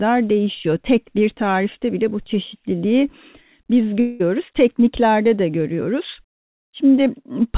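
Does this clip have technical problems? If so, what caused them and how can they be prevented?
Yes. At 4.00 to 4.22 s, just after "bile bu çeşitliliği biz", the speech gives way to a fading buzz for about 0.2 s, likely a long network dropout whose gap the receiver filled by extending the last sound. On a spectrogram this shows as smeared, repeating harmonics that dim before speech resumes; the waveform shows a decaying, periodic stretch with no true silence. The band stays capped at 4 kHz throughout, as expected from the G.711 call path. A more stable network connection, or forward error correction and redundancy on the stream, would prevent such losses.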